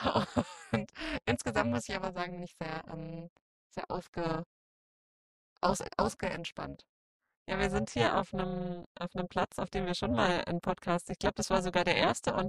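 Overlap-add ripple runs through the whole sound: the level swings by about 60 dB once per frame, at a rate of roughly 300 Hz, because the windowed frames were recombined with an overlap that does not add up to constant gain. At that rate it comes across as a harsh, buzzy roughness rather than a slow tremolo. Unlike mains hum or an added tone, the buzz rides on the signal itself and disappears wherever the sound falls silent.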